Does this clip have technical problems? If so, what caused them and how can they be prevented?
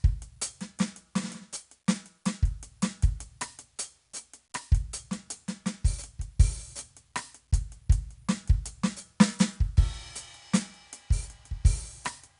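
Yes. Throughout the music, 4-bit ADPCM compression codes each sample as a coarse step from a prediction, so gritty hiss follows the loud passages. Nothing sounds above 10.6 kHz, which fits a stream of about 88 kbps. To prevent it, store the audio as full-resolution PCM or in a modern codec at an adequate bitrate instead of ADPCM.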